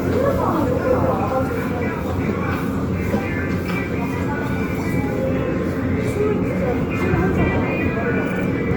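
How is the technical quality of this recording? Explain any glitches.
The technical quality is compromised by plainly audible codec damage across the whole recording.

Opus compression, from start to finish: the texture points to the codec's music mode at a starved rate, fitting something near 24 kbps. It preserves each band's overall energy but, lacking bits for detail, rebuilds content by folding lower bands upward or filling with noise. The result is grainy, rough and noisy wherever tones should be clean, with little swirling. The bandwidth stays full, reaching about 20.2 kHz, so the damage is likely from the encoding rather than from filtering.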